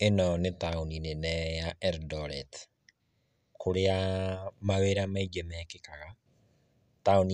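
A speech recording, with nothing technically wrong to report.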